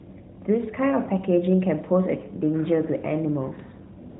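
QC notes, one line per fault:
4.10–4.19 s, AMR comfort noise: the phone stopped sending speech frames for about 105 ms, so the receiver filled the end with smooth synthetic noise built from a coarse level and spectrum estimate. Unlike a dropout, there's no silence, just featureless steady hiss replacing the real background.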